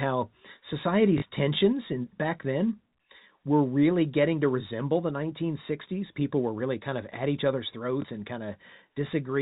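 At 1.18 to 1.22 s the speech catches in a brief robotic stutter, and a small blip follows at 8.02 to 8.04 s. This is packet loss with the last packet repeated. The first gap lasts 40 ms, which fits two 20 ms packets. The second lasts 20 ms, one packet. The receiver filled each gap by replaying the previous block. On a waveform the same 20 ms shape repeats. A spectrogram shows nothing above the 4 kHz ceiling of the G.711 telephone band.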